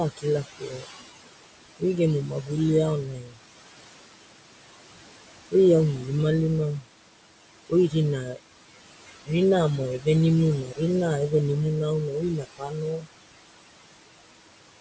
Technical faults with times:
0.00-14.80 noise suppressor artifacts
0.17-0.89 speech cut by the noise suppressor
2.27-2.51 speech cut by the noise suppressor
3.04-3.37 speech cut by the noise suppressor
7.69-8.39 speech cut by the noise suppressor
10.64-10.80 speech cut by the noise suppressor
12.08-13.08 speech cut by the noise suppressor

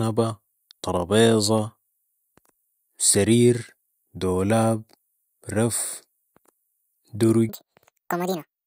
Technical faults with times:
7.49-8.66 section at the wrong speed

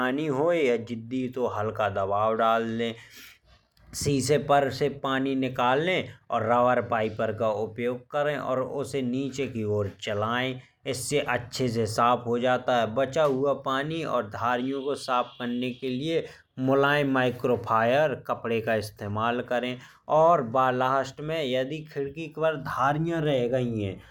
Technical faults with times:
none

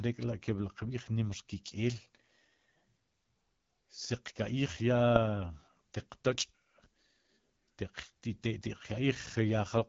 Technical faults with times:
0.00-9.89 AMR wideband (HD Voice) codec

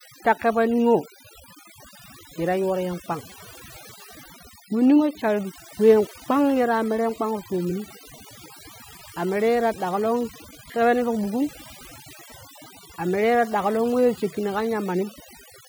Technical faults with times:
0.00-15.69 overdone noise removal

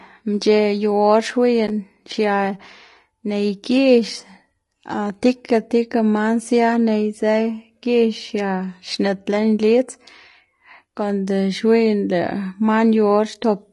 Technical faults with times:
0.00-13.73 low-delay AAC compression

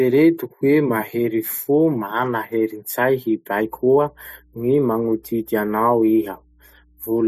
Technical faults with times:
3.55-7.28 mains hum

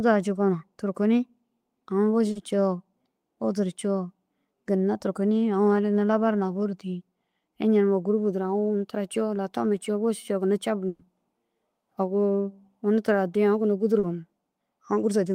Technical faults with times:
2.31-2.38 short concealed packet loss
10.87-11.02 burst of packet loss
13.99-14.06 short concealed packet loss

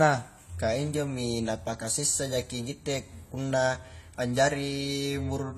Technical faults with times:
0.00-5.57 AAC compression

